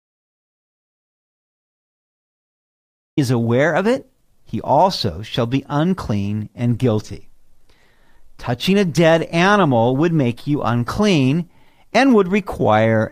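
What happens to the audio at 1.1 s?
At 1.1 s the clip is in the middle of an audio dropout to silence that is already under way when the recording begins and lasts until about 3.17 s. Throughout that span the signal is silent, with no room tone or noise floor, and the speech simply enters at the end of the gap. The likely cause is an input lost to a disconnected device, failed link or mute while the recorder kept writing silence.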